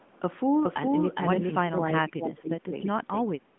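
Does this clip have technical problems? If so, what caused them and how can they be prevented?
Yes. A second path, most likely a slower capture route that picks up the sound again and runs behind the main one, mixes a full copy of the audio back in about 400 ms late at roughly the same level. This doubled audio track runs through the whole clip: every syllable is followed by a clean, undamped repeat with no room tail. To prevent it, make sure the sound reaches the mix through only one path, and mute any loopback or local monitoring feed.

From 1.63 s to 3.5 s the speech is suppressed in double talk, probably because the far end was talking at the same moment. The echo canceller could not tell this talker apart from the loudspeaker echo, so it turned the microphone signal down along with it. The speech dips by up to about 25 dB for roughly a second and a half in total across that stretch. 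To prevent it, use a headset so that no loudspeaker echo reaches the microphone, or use an echo canceller that keeps full duplex during double talk.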